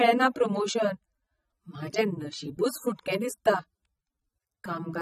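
Speech with AAC compression audible throughout: nothing above 14.5 kHz, plus dull, smeared sibilants with a warbling texture, likely from low-bitrate AAC-LC coding consistent with about 24 kbps.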